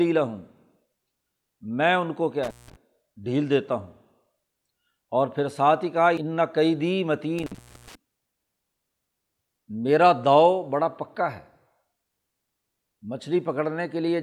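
At 2.43–2.76 s and 7.38–7.95 s, intermittent contact: a loose connection briefly opens, dropping the speech for 176 ms then 415 ms, with crackle at each edge and faint hiss between.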